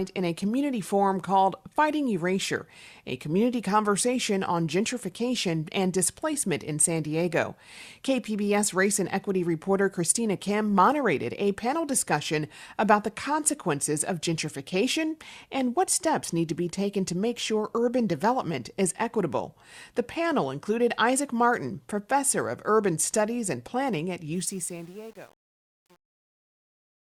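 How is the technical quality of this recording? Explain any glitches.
The recording has one glitch, at the very end. From 24.35 s to the end of the clip, right after "studies and planning at", the closing fade-out degrades. This is truncation distortion on a fade. From about 24.5 s the speech turns gritty instead of thinning evenly into silence. The fade stage keeps too few bits and adds no dither, which fits an 8-bit stage. Near the bottom, the waveform collapses into coarse square steps.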